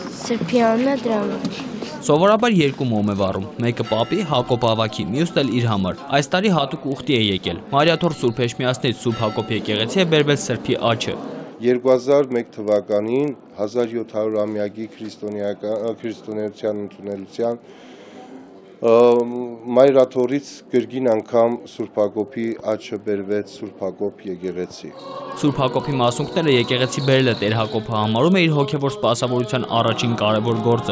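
The audio carries a regular tick running through the whole clip. It repeats 25 times a second, so it sits close to a low buzz. It appears only when there is signal and drops out in the gaps. This is a resampler restarted on every block. Each 40 ms block was converted in isolation, so its edges were computed without the real neighbouring samples. The sound points to a 48 kHz to 16 kHz conversion.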